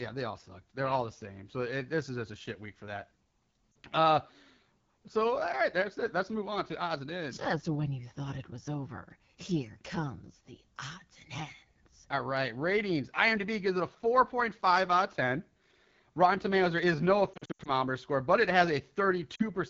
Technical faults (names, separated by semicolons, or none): AMR wideband (HD Voice) codec; lost AMR speech frames